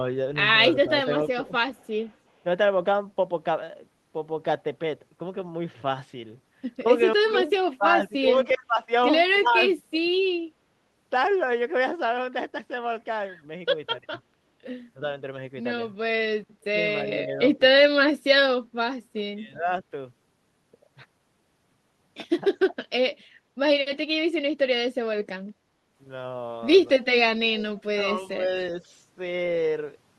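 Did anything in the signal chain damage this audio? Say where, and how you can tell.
Yes. The speech dips and chops in five places: 0.88 to 2.45 s, 7.29 to 10.1 s, 14.06 to 19.67 s, 22.7 to 23.15 s and 27.96 to 28.81 s. The pieces add up to well under a second per stretch, and the deepest cut grows from about 10 dB to about 30 dB near 23 s. This is likely speech suppressed in double talk during call processing: the echo canceller heard both ends at once and turned the talker down with the echo.

A faint delayed copy of the speech comes back at 1.47 to 2.17 s, then in short scraps at 8.49 s and 17.1 s. It trails the original by about 364 ms, then 376 ms, and rises from about 35 dB below the speech to about 15 dB below it. That points to a likely echo leak at the far end's loudspeaker phone: its canceller let part of the microphone pickup through, and the call sent it back.

At 25.59 to 25.87 s the background noise sinks by about 6 dB for roughly 300 ms, then returns. 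This is background gated by the echo canceller in call processing: while the loudspeaker was playing, the canceller clamped the microphone down, taking the room sound with it, and released it once playback stopped.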